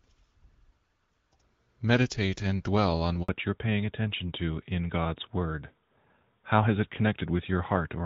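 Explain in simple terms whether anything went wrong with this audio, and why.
A handover gap hits at 3.23 to 3.29 s: the phone switched networks, and for about 60 ms no speech arrived, so the sound drops out briefly.

A fallback to narrowband follows from 3.29 s to the end: after the switch, the call left HD Voice for an older codec, so everything above 4 kHz disappears and the speech sounds duller and more muffled than before.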